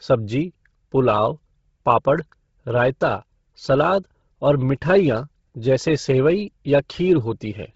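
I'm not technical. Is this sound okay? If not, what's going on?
No. From start to finish the speech sounds breathy and grainy, with a gritty hiss in place of crisp detail, and nothing above about 7.7 kHz. This is likely Bluetooth LC3 compression squeezed hard, which discards the upper sound and fills that space with noise.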